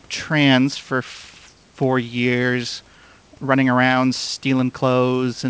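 No technical faults can be heard anywhere in the speech. The call path leaves nothing above 8 kHz, and room noise sits about 36 dB below the speech.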